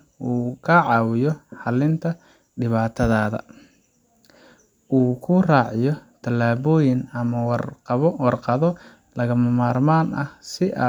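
A speech recording, and no technical fault can be heard in it. There is nothing to point to at any moment of the audio.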